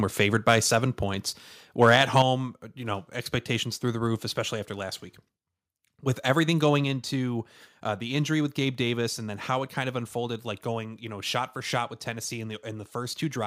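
Microphone overload at 0.49 to 0.52 s and again at 1.82 to 2.22 s puts a harsh, crackling edge on the loudest peaks of the speech. The likely cause is input gain set too high, so the peaks hit the converter's limit and their tops are flattened. The first event overshoots by about 1 dB, the longer second one by about 4 dB, and only a small share of samples is cut.

Microphone volume stepped down at 2.22 s, right as the second overload ends, and again at 6.84 s. Speech and background drop together, by about 6 dB and then about 4 dB, which likely comes from the call software cutting the device's input level in single steps.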